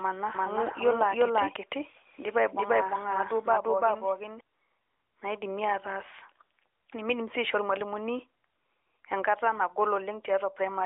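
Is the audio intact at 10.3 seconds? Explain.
Yes, the audio is intact at 10.3 seconds: there is no fault at that moment, and the speech comes through the narrowband AMR mobile channel with nothing added or dropped, only the light coloring that codec normally leaves.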